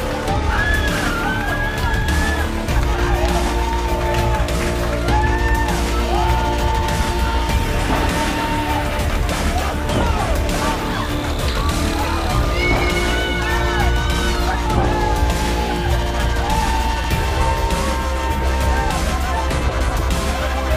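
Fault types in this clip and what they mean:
Overlapping chunks: each 5 s block starts about 7 ms before the previous one ends, so that sliver plays twice, giving a stutter-click at 2.02, 7.03, 12.03 and 17.04 s. Unlike a dropout, nothing is missing; audio repeats instead.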